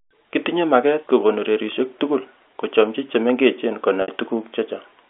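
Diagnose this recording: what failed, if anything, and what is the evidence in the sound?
The failure is in the network stage: packet loss with pitch repetition. At 4.02 s the speech turns into a brief held, buzzy tone. It lasts until about 4.08 s, a gap of 60 ms. That fits three lost 20 ms packets. The receiver filled the hole by looping the last pitch period and fading it down. Live speech then resumed. The G.711 telephone band of 300 Hz to 3.5 kHz is audible throughout.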